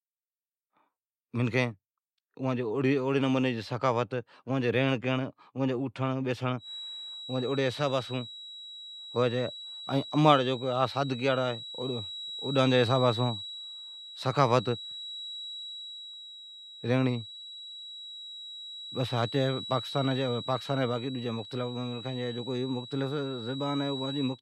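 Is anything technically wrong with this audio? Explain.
Yes. From 6.56 s to the end, a feedback whistle sits at 3.9 kHz, about 15 dB under the speech. The likely cause is a loudspeaker-to-microphone loop held just at the onset of feedback. It sounds like a thin, steady tone that swells and fades slowly in level.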